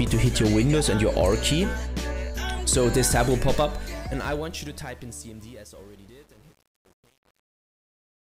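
From 3.53 s the fade-out to the end shows truncation distortion on a fade. The level stage keeps too few bits without dither, which fits an 8-bit path. From 4.34 s to 8.25 s the tail turns gritty.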